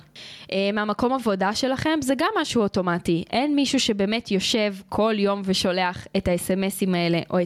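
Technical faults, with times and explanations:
Throughout, gain pumping: the level ducks by around 10 dB each time the speech gets loud, so levels feel squashed and breathing. Likely the input gain was set far too high and a fast limiter keeps clamping down on the peaks.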